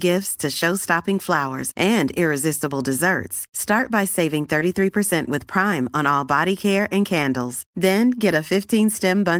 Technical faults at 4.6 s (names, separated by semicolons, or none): short concealed packet loss; lost packet rebuilt from error correction